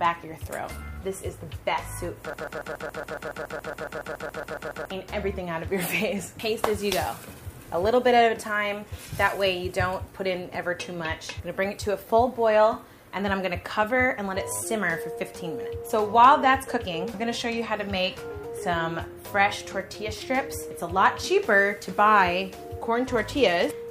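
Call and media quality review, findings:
Broken-record loop, 2.33 to 4.91 s. A 140 ms fragment repeats exactly, back to back, 18 times. Audio for that span is lost. Waveform shows identical tiled segments; spectrogram shows the same pattern stamped every 140 ms. Likely a stalled player, decoder or stream buffer resending its last held fragment.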